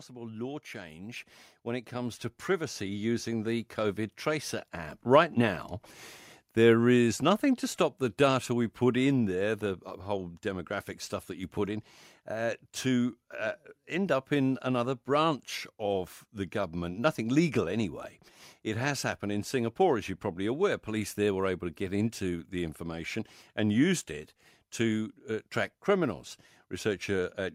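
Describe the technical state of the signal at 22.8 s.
At 22.8 s the speech signal is intact, with no audible dropout, clipping, distortion or other fault at that point.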